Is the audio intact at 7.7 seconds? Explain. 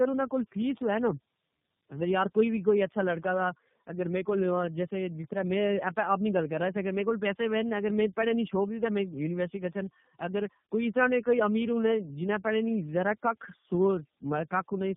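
No, at 7.7 s you're hearing tandem speech coding, which runs through the whole clip. The speech sounds like it went through about three low-rate speech codecs in a row, each re-encoding the last one's damage, so it's rough, muffled with nothing above 3.6 kHz, and warbly.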